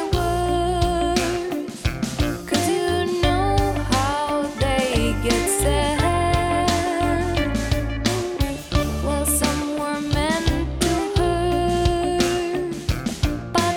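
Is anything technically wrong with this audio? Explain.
No, nothing in this audio stood out as technically wrong on listening.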